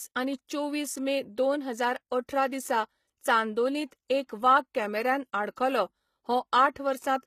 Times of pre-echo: 0.47, 3.91-4.10, 5.54-5.57

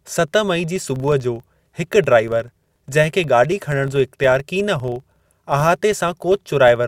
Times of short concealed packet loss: none

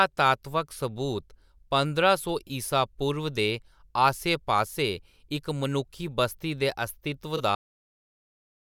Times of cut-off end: 7.55-8.66

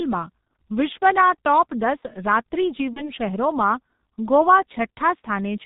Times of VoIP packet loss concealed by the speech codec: 2.93-3.12

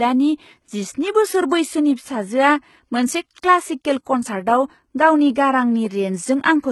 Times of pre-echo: 4.04-4.06

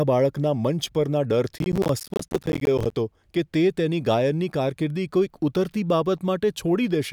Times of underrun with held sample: none

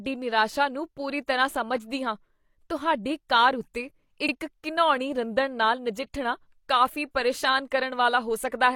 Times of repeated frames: 4.25-4.29

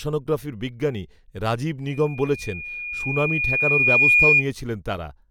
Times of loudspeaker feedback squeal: 1.87-4.45

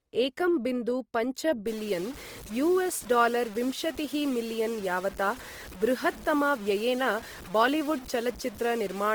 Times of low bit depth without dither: 1.67-9.15

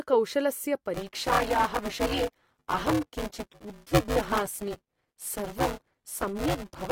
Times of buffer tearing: 0.94-6.91

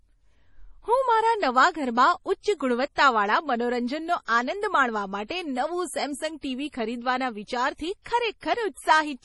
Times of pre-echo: 2.95-2.98, 5.26-5.30, 8.02-8.06

